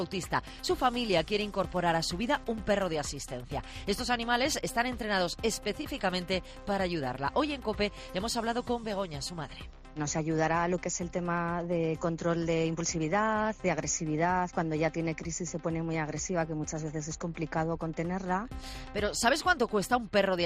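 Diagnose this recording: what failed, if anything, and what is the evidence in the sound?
Nothing here needs diagnosing: no stage in the chain has left a mark on the sound, so there's nothing to trace or fix.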